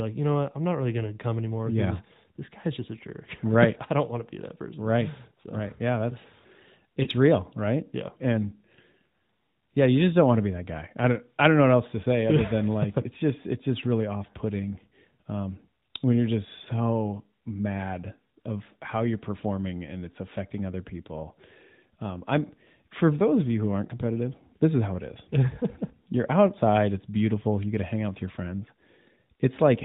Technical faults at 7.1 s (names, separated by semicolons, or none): lost AMR speech frames